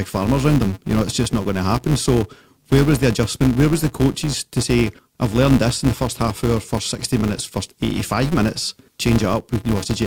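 Throughout the speech, a filter restarted on every block: its internal state is discarded at each block boundary, so every block starts from silence instead of continuing smoothly from the last. Each restart leaves a small transient, and these recur about 188 times a second, which fits a 256-sample block. The result is a steady buzz at 188 Hz riding under the speech, growing louder as the speech gets louder and fading in quieter passages.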